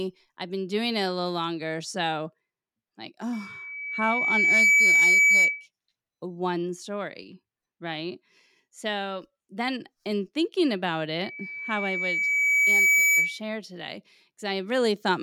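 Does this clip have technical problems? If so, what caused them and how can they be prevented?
Yes, there's loudspeaker feedback squeal from 3.33 to 5.67 s, ending just before "one story", and again from 11.23 to 13.41 s, after "then in thinking about". The mic picks up its own speaker, so a 2.3 kHz tone loops and swells over a second or two to about 10 dB above the speech. Keep mics behind the speakers and notch 2.3 kHz out of that feed.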